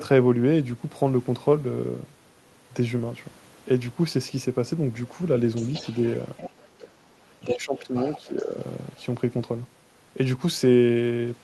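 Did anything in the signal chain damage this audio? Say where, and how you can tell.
Yes. Other side's voice leaking through, in call processing: a second voice sits about 15 dB under the talker at 5.55–6.88 s and about 5 dB under at 7.47–8.46 s. This is likely residual echo.

Speech suppressed in double talk, also in call processing: from 7.36 to 8.56 s the talker dips by roughly 10 dB while the other voice overlaps, likely the canceller ducking both. A network dropout would not track the far side.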